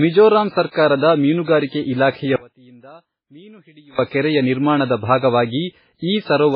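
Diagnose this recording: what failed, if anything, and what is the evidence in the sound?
The codec stage is at fault throughout. Nothing is present above 5.3 kHz. Smeared, swirly artefacts sit under a second layer of coding noise. This is likely transcoding between lossy codecs. The sound points to a very low-rate MP3 re-encoded to WMA, keeping the MP3's cut-off.

The speech drops out abruptly from 2.36 to 3.99 s, about 1.63 s. It does not fade to silence. A faint trace of the signal stays, about 25 dB below normal. This is an audio dropout to a faint residue. The likely cause is a lost feed while the downstream path stayed live.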